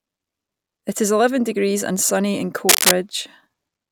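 At 2.69 s a burst of cable scratch noise cuts in over the speech and lasts until 2.97 s, a little under 0.3 s. It is a dense, irregular crackle and rustle sitting a few decibels above the speech itself. The likely cause is a worn cable, connector or control being moved, so that its contact resistance fluctuates rapidly and injects uneven noise bursts into the signal for as long as the movement continues.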